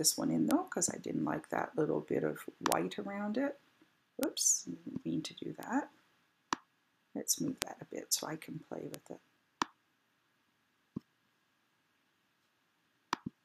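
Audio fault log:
0.51, 2.72, 4.23, 5.63, 7.62 and 8.94 s, bit error spikes: each is one hard tick, peaking at about -7 to -19 dBFS, where a flipped bit jumped the sample value by a power of two and immediately returned. The waveform shows a lone needle, and the spectrogram a thin full-band vertical line.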